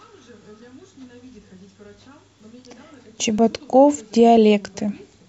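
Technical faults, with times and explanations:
2.39 s, 3.39 s, 4.37 s: overlap between stream segments; at each 1.0 s segment boundary, 11 to 18 ms of speech is trimmed, so the waveform jumps.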